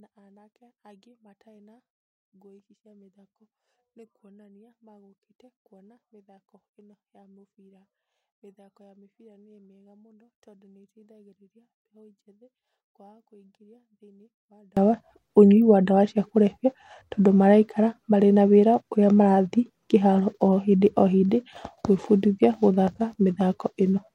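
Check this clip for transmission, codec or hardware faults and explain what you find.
One fault stands out: from 0.00 to 14.77 s the speech collapses to a faint residue, about 36 dB down, which points to one channel inverted, likely from a polarity swap in one leg of the stereo path. Summed to mono, the centred voice cancels almost entirely, leaving only the small left-right difference. On a waveform this section is a near-flat sliver, and a spectrogram shows a washed-out, low-energy band before full level returns.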